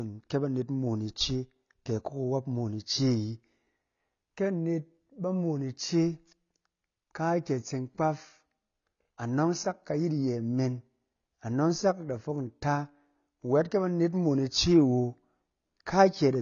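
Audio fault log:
Throughout, AAC compression: speech sounds dull and smeared, nothing above 6.9 kHz, with fizzy sibilants and warble, unlike plain low-pass, likely from a low-bitrate encoder.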